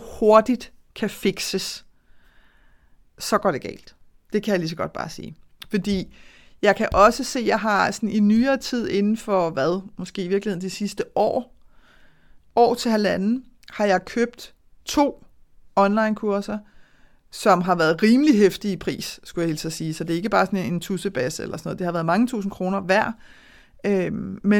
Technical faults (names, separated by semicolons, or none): none